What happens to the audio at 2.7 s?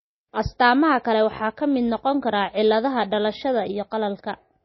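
At 2.7 s you're hearing the same thing that runs through the whole clip: the speech has the watery, swirly smear of MP3 compression, and there's nothing at all above about 5.8 kHz. That hard treble ceiling is the encoder giving up the top end when bits are scarce, which points to something like 24 kbps. Weak frequency lines flicker on and off between frames, so consonant edges blur and sibilants turn thin and metallic. MP3 is the likely culprit.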